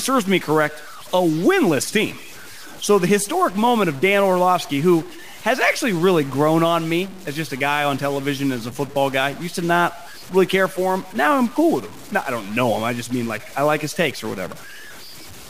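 From start to finish the speech carries a stuck bit, most likely one line of the converter or data path held fixed at 0 or 1 instead of following the signal. Roughly every other sample then lands off by that bit's weight, a fixed step near -35 dBFS, in a pattern tied to the waveform. The result is a harsh, buzzy grit over the speech, and the pauses fill with a steady hiss rather than falling silent.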